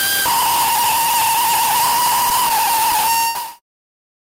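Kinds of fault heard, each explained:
Burst of packet loss: Several consecutive packets arrived too late or not at all, leaving the receiver with nothing to play from about 3.29 to 3.38 s. It covered the gap by extending the last received sound for roughly 60 ms while lowering its level, heard as a brief fading smear. When real audio returns, about 60 ms of material has been skipped, so the sound jumps ahead. This occurs during the fade-out that ends at 3.62 s.
Short stall from a late packet: Around 3.59 to 3.65 s a packet was not there when it was due, the jitter buffer ran empty, and the receiver held the preceding sound for about 32 ms until the packet arrived. Playback then resumed from the same point, so nothing is lost, but that moment is drawn out with a slight buzzy dip, and everything after it plays about 32 ms later than it otherwise would.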